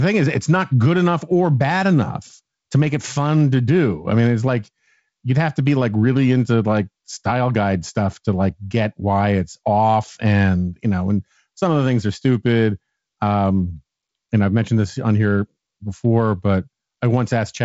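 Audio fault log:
Nothing stood out on listening to this speech clip, which carries the band-limited character of G.722 wideband telephone coding.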